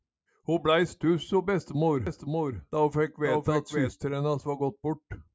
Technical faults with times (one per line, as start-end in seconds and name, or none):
2.07-3.89 doubled audio track